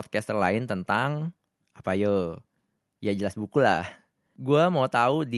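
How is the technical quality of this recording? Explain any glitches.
No glitches; the speech comes through intact and steady.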